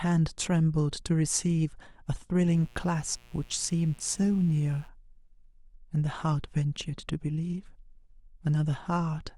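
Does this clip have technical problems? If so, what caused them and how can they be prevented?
Yes. From 2.45 to 4.90 s, a mains buzz sits under the speech, well below it. Its raspy edge separates it from plain hum. A smooth 60 Hz tone would sound dull and round, but here sharp switching spikes, twice per mains cycle, stack harmonics of 60 Hz up into the kilohertz range. Those spikes typically enter through a dimmer, a rectifier or poor shielding. Prevention: keep dimmers and switching supplies off the audio circuit, and use shielded, balanced cabling.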